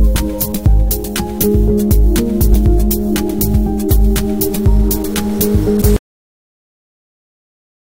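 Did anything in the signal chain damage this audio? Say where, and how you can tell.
Yes. At the codec stage, damaged data in the compressed stream causes a brief disturbance at 5.81 s as the decoder loses frame sync.

At the buffer or playback stage there is a cut-off end. At 5.96 s the sound stops mid-event into digital silence with no decay, because the final buffers were never written.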